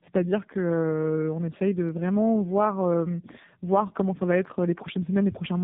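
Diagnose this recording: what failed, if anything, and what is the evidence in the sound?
Tandem speech coding failed at the codec stage, throughout the clip. The speech is rough, muffled and warbly, with nothing above 3.7 kHz. It sounds like two low-rate speech codecs in a row, which fits a G.729A leg and then AMR-NB, bridged by G.711. Each coder re-encodes the previous coder's damage, so the errors compound.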